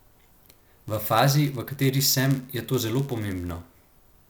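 From start to finish, one stage hands over blocks slightly shorter than the next stage expects to read, and the shortfall in each block is filled with zeros. This is a block size mismatch (padded). Each padded block carries a brief silent gap, and those gaps repeat at about 100 Hz, putting a steady buzz under the speech. The inserted silence also stretches the audio, so it runs at 0.996 times its proper speed while the timbre stays the same.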